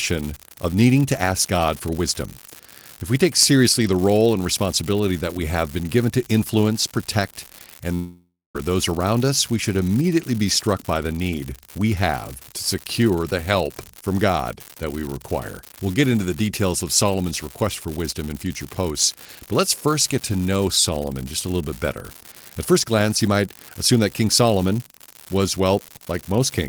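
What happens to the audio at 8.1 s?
After "given to influence protect", the sound turns into a fading buzz and then quiet until "those around us we" returns at 8.56 s. This is likely a long network dropout starting at 7.94 s: about 0.6 s of audio never arrived, so the receiver stretched the last sound before falling silent. A steady crackle runs underneath throughout, from an unreliable data bit that is wrong in random samples and adds equal-sized spikes.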